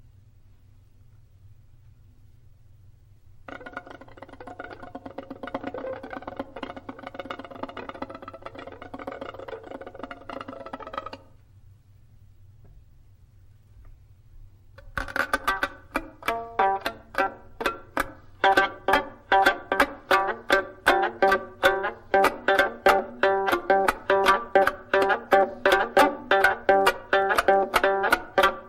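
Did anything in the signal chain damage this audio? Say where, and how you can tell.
Yes. From 0.12 s to the end of the clip there is a fast, soft rattle of clock slip clicks, about one every 20 ms, so roughly a thousand in all. It points to the converter stage, likely two devices on unsynchronised clocks about a tenth of a percent apart, each slip dropping or repeating one sample. Unlike buffer underruns, there are no gaps or irregular dropouts, only a perfectly even tick rate.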